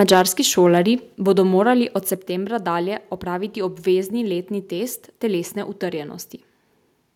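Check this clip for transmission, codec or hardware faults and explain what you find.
Two hardware-side faults are present in the speech: microphone overload, then the microphone volume being stepped down three times.

Microphone overload runs from 0.00 to 0.21 s, just before "šolarji bodo". The loudest peaks drive about 4 dB past the converter's limit, and a few percent of samples are flattened. The likely cause is an input gain set too high, so the tops of the waveform are sliced off. That squaring adds a harsh, crackly edge to the opening syllables.

The microphone volume stepped down at 0.14, 1.14 and 2.16 s. The drops are about 3 dB, about 4 dB and about 4 dB. The first falls inside the clipped stretch, just before "šolarji bodo". The third comes just before "dalje opraviti obvezni". Each step is likely the call software reacting to an over-hot microphone and cutting the device's input level in one jump. 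Voice and background drop together and abruptly each time.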